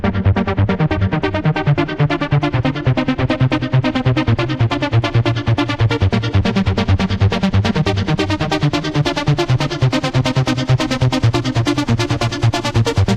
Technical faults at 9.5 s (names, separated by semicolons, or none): none